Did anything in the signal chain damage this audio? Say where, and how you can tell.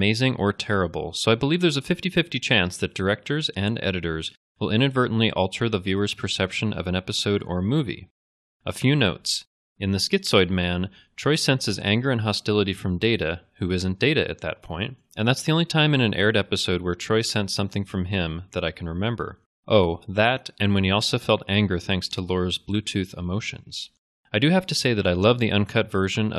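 No, nothing in this speech recording stood out on listening as a sign of damage anywhere in the signal chain.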